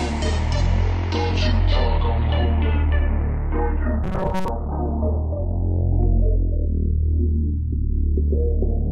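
From 4.04 to 4.48 s a rigid, metallic 188 Hz buzz appears, likely robotic sound from repeated short buffers, drawn as evenly spaced horizontal spectrogram bands.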